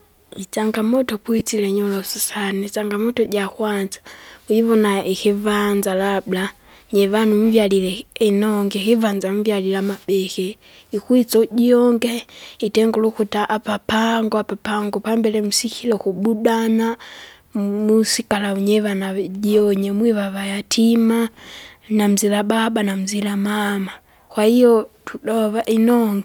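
Lost LE Audio frames: at 1.39–1.41 s, just before "inyorosu sana isangamoto jakwanza", about 20 ms of speech went missing, fitting two dropped frames. At 3.25 s, after "inyorosu sana isangamoto", a 10 ms gap fits one more. Each time the decoder filled the hole by repeating the last spectrum with scrambled signs, so the speech briefly blurs into a short noisy smear.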